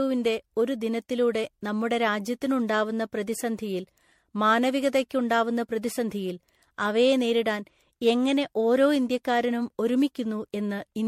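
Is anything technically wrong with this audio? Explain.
Yes. Throughout the speech the sound is swirly and hollow, with a smeared quality, consonant attacks blurred, and nothing above 16.5 kHz. This is generation loss, likely from the audio being decoded and re-encoded around seven times with a lossy codec. The character points to MP3 at about 64 kbit/s. Each pass re-quantises on a shifted frame grid, so noise and spectral gaps pile up beyond what one encode at that rate would leave.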